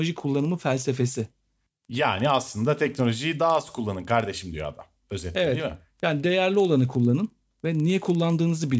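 The resampler restarted on every block throughout the speech, converting each 50 ms chunk in isolation, consistent with a drop from 44.1 kHz to 16 kHz. Each block edge carries a small error, heard as a rough 20 Hz buzz that appears only while speech is present.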